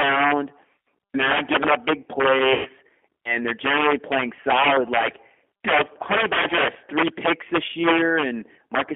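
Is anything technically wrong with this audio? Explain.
Yes, three faults can be heard in this speech clip.

Integer overflow runs throughout. On the loudest syllables the level was pushed about 12 dB past the maximum, and instead of being held at full scale, the samples that exceeded it (a few percent of the clip) wrapped around to the opposite extreme. Each wrap is a full-range jump, so loud moments break into violent, splintering cracks. Ordinary clipping would flatten the peaks into a duller buzz, but these cracks are far harsher and sound like sharp snaps.

The G.729 codec character is also present for the whole clip. The speech has been rebuilt from a vocal-tract filter, a pitch predictor and a few pulses per subframe, which fits an 8 kbit/s G.729-family encoder. The band is held between 250 Hz and 3.4 kHz, and the coding damage is plainly audible as a rough, slightly synthetic texture. 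Simple telephone band-limiting would narrow the sound without adding that artificial graininess.

VoIP packet loss concealed by the speech codec occurs from 2.53 to 2.69 s. About 120 ms of audio went missing, which fits four lost packets. Rather than leaving a gap, the decoder carried its last pitch and filter forward and lowered the gain frame by frame, so the sound smears into a fading, stretched sound. The voice then stays weak for a moment after real packets resume. This stretched, decaying sound is what separates it from a plain dropout, which would simply go silent or click.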